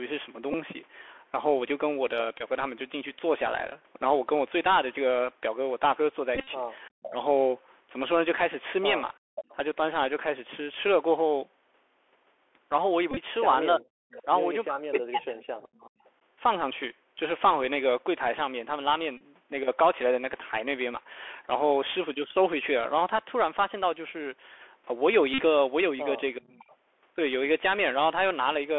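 Speech clip heard through a Bluetooth CVSD headset codec for its whole length. The sound is confined to a 300 Hz to 3.4 kHz telephone band, which fits a 64 kbps CVSD link. Its one-bit adaptive-step coding audibly roughens sibilants, distorts loud high-frequency passages and leaves a granular hiss beneath the talker. Bluetooth headset packet repeats, where lost packets are replaced by re-decoding the previous one, cause short buzzy stretches at 0.53–0.55 s, 2.38–2.42 s, 6.35–6.48 s, 13.11–13.18 s, 19.17–19.21 s and 25.34–25.42 s. The longer runs carry the 3.75 ms repetition heard as a buzz near 267 Hz. Speech is suppressed in double talk at 6.88–7.15 s, 13.78–15.94 s and 26.37–26.71 s, with the voice dipping steeply or dropping out in pieces, likely because an echo canceller ducked the near talker while the far side was also speaking. Echo leak appears at 7.01–7.1 s, 9.35–9.55 s, 14.09–16.1 s and 26.7–26.76 s as a quieter copy of the voice trailing by roughly 370 to 420 ms, likely residual loudspeaker pickup an echo canceller failed to remove. 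Background gating by the echo canceller at 9.19–9.35 s pulls the room sound down by about 40 dB before it recovers.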